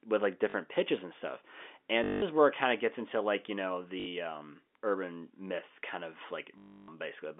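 Telephone-band speech, limited to roughly 250 Hz to 3.5 kHz by G.711 coding, with packet loss where the last packet is repeated at 0.50 to 0.54 s (between "with like" and "pitches and stuff"), 2.04 to 2.22 s, 4.00 to 4.06 s (after "into like you know"), and 6.58 to 6.88 s (after "urban myth kind of"). The longer runs buzz at about 50 Hz, which fits 20 ms packets. The robotic stutter is what separates this from silent dropouts or smooth concealment fades.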